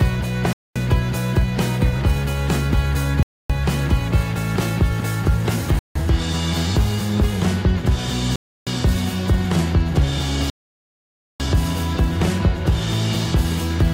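The sound drops to dead silence five times, at 0.53–0.76, 3.23–3.50, 5.79–5.96, 8.36–8.67 and 10.50–11.40 s, each time resuming where it stopped or slightly later. These are likely Bluetooth stalls, where delayed packets empty the headphones' buffer. The waveform shows flat gaps, and the spectrogram shows blank vertical bands.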